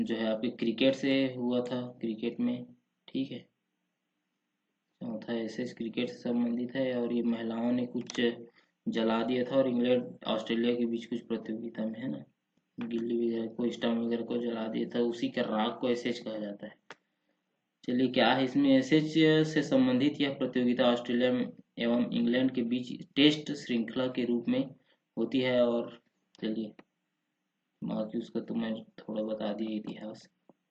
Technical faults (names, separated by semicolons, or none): Bluetooth SBC bit pool drop